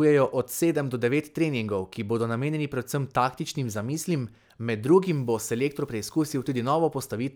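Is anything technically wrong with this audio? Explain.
Yes. From 5.08 to 6.58 s the speech turns grainy, with the grit tracking each syllable and the quietest parts sputtering. This is likely low bit depth without dither, which fits rounding to about 9 bits and leaves error roughly 40 dB below the signal. A waveform shows visible stair-steps, and a spectrogram shows broadband hash that rises and falls with the speech.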